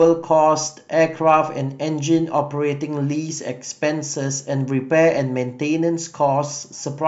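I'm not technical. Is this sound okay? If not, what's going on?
No. There are clock slip clicks from about 0.26 s to 7.06 s: faint, regular ticks roughly every 0.4 s, about fifteen in all, heard over the speech. They likely come from two pieces of equipment each keeping their own time, one running roughly 50 parts per million off the other. Each time that small drift adds up to a single sample, one sample gets dropped or repeated, and that tiny jump is the tick you hear.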